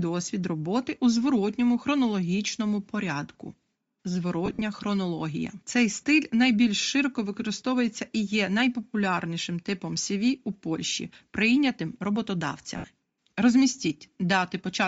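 All the way through, the speech has a breathy, grainy top end, likely Bluetooth LC3 compression at a low rate, with upper bands swapped for filler noise.

From 4.46 to 4.62 s there are lost LE Audio frames: scattered gaps, the longest around 50 ms, where the decoder smears recycled spectrum. Another 70 ms dropout hits at 12.77 s.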